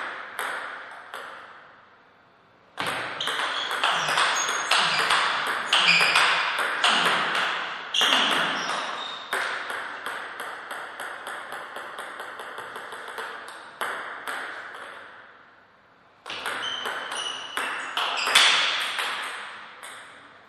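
Nothing here trips the ear as a technical fault, so there's no problem worth pointing to anywhere in this audio.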